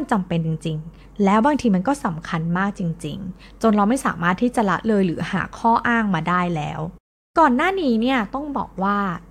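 No technical faults can be heard in the speech at any point; the signal stays continuous and stable throughout.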